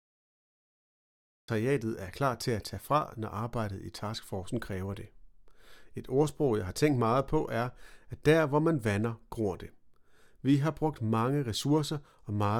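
A cut-off start opens the clip: from 0.0 s to 1.48 s there is nothing but digital silence, and then the speech appears abruptly at 1.48 s, already partway through a sound. Capture evidently began after the talker had started, so the first portion was never recorded. With no natural attack or gradual onset, the entry sounds chopped, as if a switch was flipped mid-utterance rather than the sound beginning on its own.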